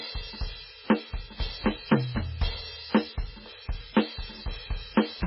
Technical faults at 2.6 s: MP3 compression

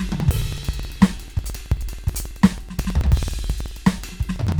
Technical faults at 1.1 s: periodic USB or driver dropouts

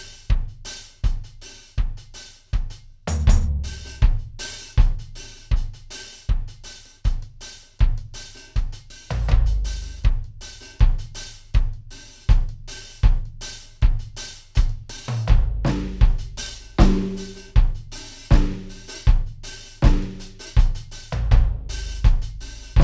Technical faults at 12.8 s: wrong sample rate

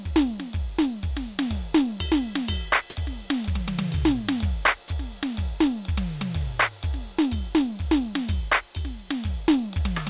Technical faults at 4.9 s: sound dropped by the voice detector

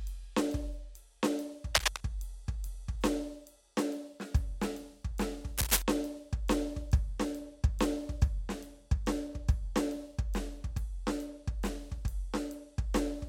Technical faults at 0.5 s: none

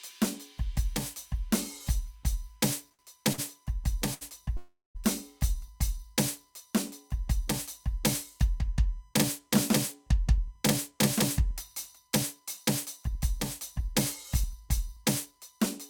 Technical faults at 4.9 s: USB whine; call audio freeze

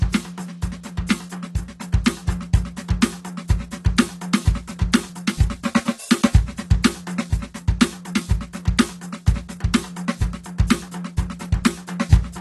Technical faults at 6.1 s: AAC compression

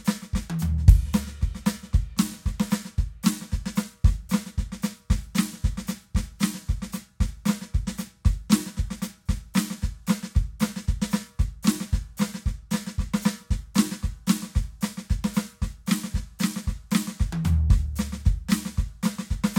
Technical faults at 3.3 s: none

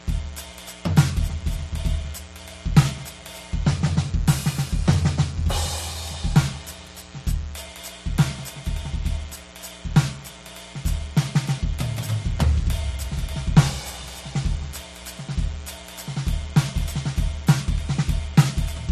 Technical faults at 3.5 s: mains buzz; transcoding between lossy codecs

